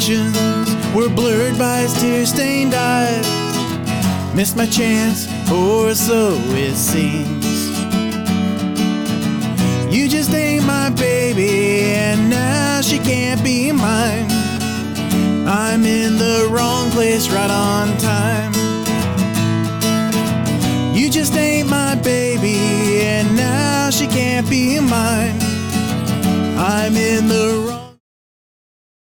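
No technical faults can be heard anywhere in the recording. Near the end the level fades out smoothly from roughly 27.5 s, reaching silence at about 28.0 s, with no click or hard edge.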